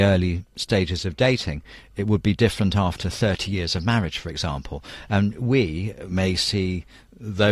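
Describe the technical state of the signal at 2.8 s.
At 2.8 s the speech signal is intact, with no dropout, distortion, glitch or other technical fault at that point.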